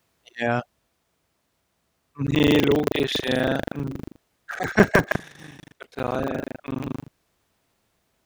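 From 2.24 s to the end of the speech, buffer tearing sets in: the writing program and the playback hardware have drifted out of step, so their positions cross within every buffer period. Roughly a third of each buffer replays audio from about 150 ms earlier, joined by hard edges on both sides. The result is a steady robotic buzz at 25 Hz, which fits a 40 ms period, riding on the voice whenever it is present.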